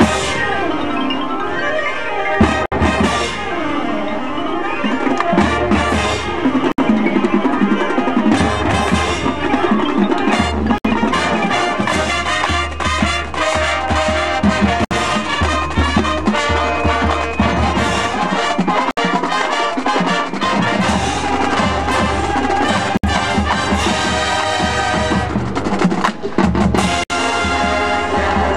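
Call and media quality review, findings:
Gap at a join of encoded pieces: short dropouts in continuous sound at 2.66, 6.72, 10.78, 14.85, 18.91, 22.97 and 27.04 s, about every 4 s. The first is 60 ms, the rest 64 ms each. The sound resumes where it stopped. Probable component is segment concatenation after encoding. Each piece was encoded separately and joined untrimmed, so the encoder's leading delay and last-frame padding remain at every boundary, with codec-smeared edges around each gap.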